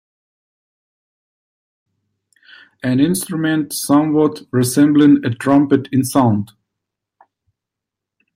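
At 3.92 to 4.26 s the speech hits hard clipping, overdriven by about 2 dB, so its peaks are squared off flat at the ceiling of some stage in the chain. It recurs at 4.82 to 5.09 s (about 1 dB), 5.49 to 5.75 s (about 3 dB) and briefly at 6.16 to 6.22 s (about 3 dB). The flattened tops add high harmonics, heard as a short crackly roughness on the loudest syllables, strongest in the 3 dB passages.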